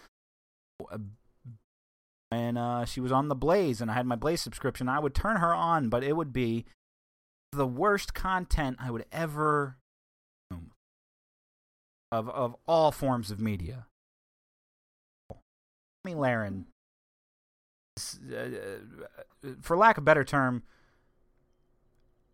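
Speech with repeated clipped starts after a pause at 0.36, 1.89, 7.13, 10.08, 11.72, 14.89, 15.65 and 17.55 s, for example after "but it would be" and before "of all forms of". After each silence of 0.31 to 1.06 s, the output device was likely asleep and needed 0.40 to 0.44 s to wake. On a waveform or spectrogram, energy starts abruptly with no onset ramp, as the silent gaps stretch into the speech.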